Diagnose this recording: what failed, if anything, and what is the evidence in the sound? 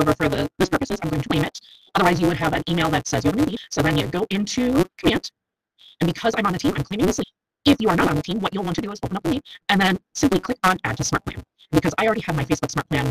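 A block size mismatch (truncated) at the driver or buffer stage runs through the whole recording. A steady buzz sits at 188 Hz, and the audio plays 1.88 times too fast while keeping roughly its normal pitch. This fits a next stage reading 256-sample blocks while the stage before writes blocks about 1.88 times longer, so the tail of each block is discarded. On a spectrogram, a horizontal line at 188 Hz with harmonics appears. The waveform shows a small discontinuity every block.

Damaged data in a compressed stream shows up at the codec or storage stage as three short blips at 1.28 s, 3.55 s and 7.22 s. At each point the decoder hit corrupted frames, misread or rejected them, and resynchronised on the next frame header. A spectrogram shows each as a thin vertical smear of broadband energy. The waveform shows an abrupt spike or a hard cut where the signal jumps.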